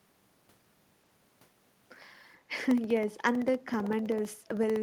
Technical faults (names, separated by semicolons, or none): echo leak